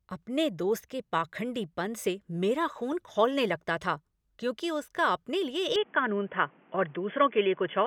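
A speech recording in which, at 5.76 s, the sound abruptly turns dull and boxy and stays that way to the end of the clip. Nothing above 3.4 kHz survives, there is no gap at the transition, loudness stays about the same, and a faint new background noise appears well below the speech. This pattern points to an input switched to a poorer device, likely a headset call profile or a lower-grade microphone taking over mid-recording.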